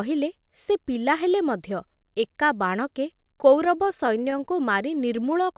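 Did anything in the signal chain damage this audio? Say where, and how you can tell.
Yes. From 3.26 to 4.41 s the speech catches and hitches in ten brief stalls, none longer than 15 ms. These are repeated stalls (stutter) at the network and jitter buffer stage. Packets arrived late, so the buffer kept running dry and the receiver stretched the last sound for about 91 ms in total. Nothing is lost, but the speech drags.

From 4.91 to 5.53 s the speech runs slightly slow, at about 94% speed with unchanged pitch, and sounds drawn out. This is a jitter buffer slow-down in the call's receive buffer. The buffer repeated single pitch periods to rebuild its reserve, adding 41 ms.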